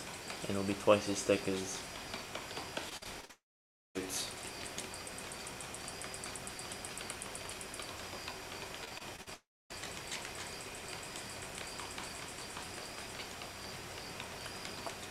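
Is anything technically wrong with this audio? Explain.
Yes. There are two kinds of fault, and each occurs twice.

Repeated packet loss (robotic sound) runs from 2.89 to 3.31 s and again from 8.85 to 9.28 s. Each stretch has five short breaks of at most about 46 ms. Each break is patched by stretching the preceding sound, which leaves choppy fragments with pieces missing.

A long network dropout follows each of those stretches, at 3.31 to 3.97 s and at 9.34 to 9.72 s. The sound smears into a fading buzz or hiss, then goes silent for about 0.54 s and 0.25 s respectively, before resuming with material missing. This is likely a network dropout. It differs from the robotic stretches because it is one sustained hole rather than rapid small ones.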